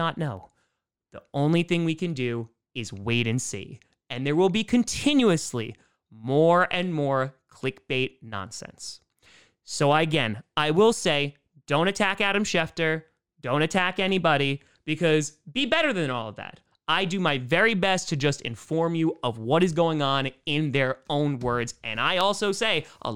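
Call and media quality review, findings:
Dropped samples at 0.37, 10.77 (between "again I" and "say don't attack"), 14.09 (after "don't attack") and 22.21 s: isolated sharp clicks in the speech, likely from a fraction of a millisecond of samples skipped, so the waveform steps abruptly.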